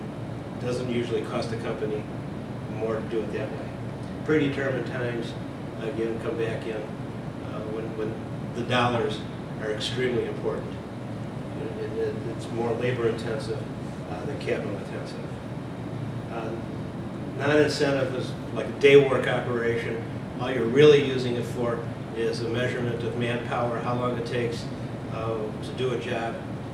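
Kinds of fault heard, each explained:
Resampler restarted on every block: the converter going from 44.1 to 48 kHz seems to treat each 40 ms block as if nothing came before or after, so every seam gets a small error. You hear it as a steady 25 Hz tick-buzz riding along whenever there's signal.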